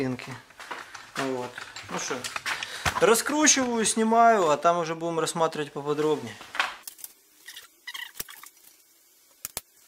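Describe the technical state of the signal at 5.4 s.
At 5.4 s the signal is intact, with no audible fault at that moment.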